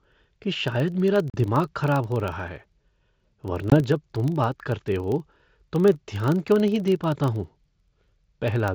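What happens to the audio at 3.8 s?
Packet loss on an ADPCM call hits here. About one 20 ms packet went missing and was filled with silence, and the decoder's adaptive predictor and step size fell out of step with the sender's. At 3.70 s there is a hard-edged 20 ms hole, then the sound comes back briefly distorted until the decoder settles by 3.77 s.

Underneath this, a filter restarted on every block begins each block from silence. The small transient at each block start runs through this moment as a 25 Hz buzz that follows the signal's level.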